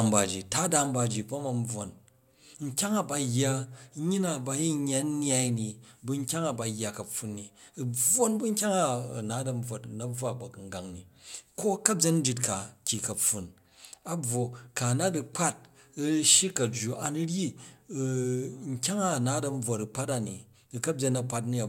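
No technical faults can be heard anywhere in the recorded speech. There is nothing here that needs a timestamp or an explanation.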